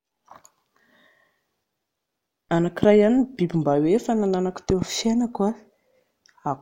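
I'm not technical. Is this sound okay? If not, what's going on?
No. There's a loud pop, a sharp click over the speech, at 2.83 to 2.86 s, and a double pop at 4.70 to 4.84 s, likely from an electrical jolt such as a plug or static.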